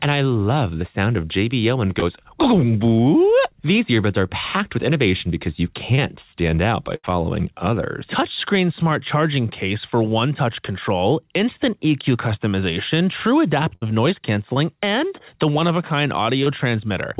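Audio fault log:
2.00–2.03, 5.95–6.00, 14.54–14.58 and 16.44–16.48 s: short concealed packet loss. Each is a brief smear or wobble where 20 ms of audio failed to arrive and the receiver stretched the preceding sound across the gap.
6.96–7.05 and 13.75–13.84 s: burst of packet loss. A held buzz or fading hiss, then the sound jumps ahead. About 80 ms and 60 ms were lost, and the receiver covered each gap by extending the last sound and turning it down.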